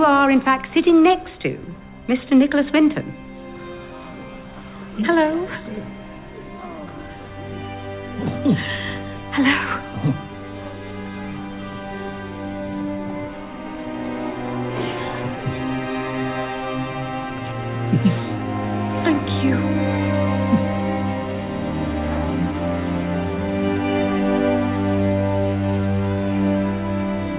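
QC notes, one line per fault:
No faults found in this clip. The sound went through a WebRTC call path using the G.711 A-law codec at 64 kbps, so nothing is heard above 4 kHz, as expected for that codec.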